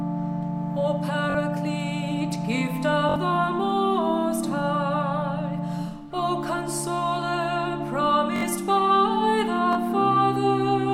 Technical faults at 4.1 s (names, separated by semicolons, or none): none